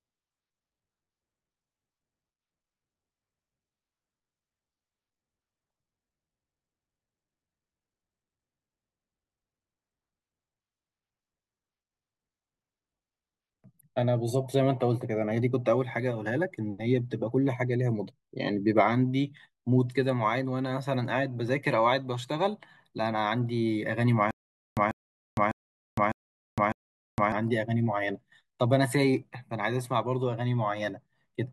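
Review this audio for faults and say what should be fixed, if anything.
From 24.31 to 27.32 s the speech hits a stutter with silent gaps: a 141 ms fragment plays, then about 461 ms of dead digital silence, and the same fragment comes back every 603 ms, five times over. That pattern points to a playback or stream stall, likely the player retrying with only its last buffered chunk and running dry each time, so the three seconds that belonged there are simply gone. Giving the playback path a deeper buffer and steadier delivery from the source should keep it from starving like this.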